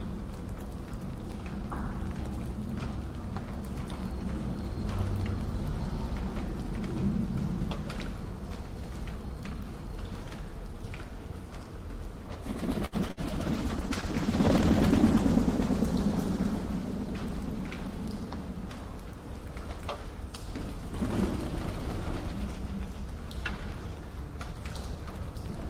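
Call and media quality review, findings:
Short stall from a late packet, 12.85–12.94 s: sound held about 70 ms, then resumes where it left off with nothing skipped. Jitter buffer underrun; playout delay grows by 70 ms.

Short concealed packet loss, 13.08–13.11 s: brief smear. Decoder extrapolates the previous sound across a 9 ms hole, then crossfades back into real audio.

Burst of packet loss, 13.11–13.19 s: held, fading tail, then audio resumes further on with 60 ms gone. Consecutive loss concealed with attenuating extrapolation.

Call bitrate drop, 13.48–18.33 s: rougher, duller sound. Bandwidth estimate fell and the encoder went from 40 to 14 kbps, staying at the minimum for 1.33 s with coarser coding.

Jitter buffer speed-up, 16.51–17.54 s: audio slightly faster, pitch unchanged, about 3% fast. Receiver trims pitch-period segments, roughly 40 ms in total, to shrink excess buffered delay.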